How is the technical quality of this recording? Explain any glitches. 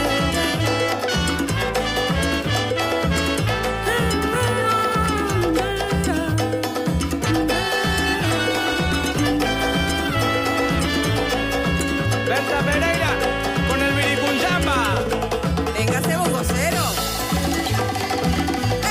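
One fault stands out. From 7.45 to 13.93 s there is a call bitrate drop: the encoder was starved of bits, sounding like a fall from roughly 64 to 24 kbps, worst for about 3.6 s. The audio turns coarse, watery and dulled at the top, then recovers. Unlike packet loss, it degrades continuously without gaps.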